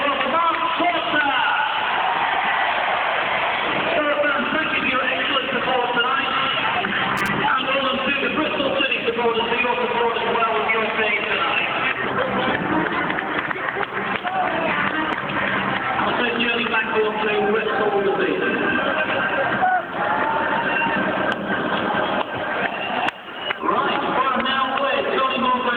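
A brief irregular burst of scratchy crackle chops the audio from 7.17 to 7.28 s, the sound of loose connector crackle from a worn contact making and breaking.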